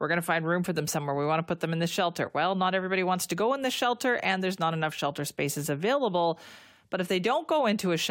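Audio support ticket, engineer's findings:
No faults found in the speech recording; nothing audible points to a failing component, so no action needed on the audio path.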